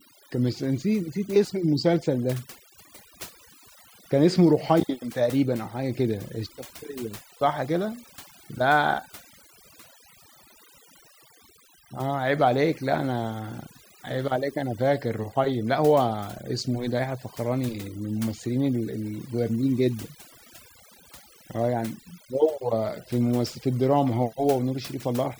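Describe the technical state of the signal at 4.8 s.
At 4.8 s the speech is under overdone noise removal, which runs throughout the clip rather than starting or stopping here. A noise reduction stage set far too aggressively is pulling individual frequency bands down hard, or muting them outright, whenever their level sits close to its noise estimate, and quieter parts of the voice get caught with them. The background collapses toward silence with sparkling, twinkling specks.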